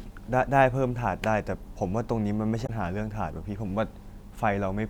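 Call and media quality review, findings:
Damaged data in a compressed stream, 2.63 to 2.70 s. Speech broken by a brief corrupted burst of about 70 ms. Probable component: the compressed file or stream. Bad bytes in the stream. Decoder misreads frames, loses sync, resumes at the next valid frame header.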